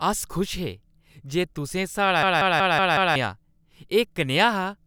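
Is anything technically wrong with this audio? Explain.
Yes. From 2.23 to 3.16 s there is a system hang loop: the system froze while the sound hardware kept replaying one 186 ms buffer, consistent with 8192 samples, so the speech repeats as a machine-gun stutter at 5.4 Hz, and about a second is lost.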